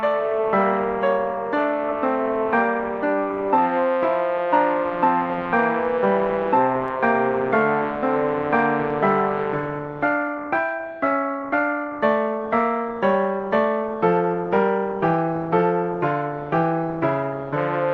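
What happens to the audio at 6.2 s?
Nothing goes wrong at 6.2 s: the audio passes through the call path intact, with only the steady coding character and roughly 12 kHz top end of the Opus link that run through the whole clip.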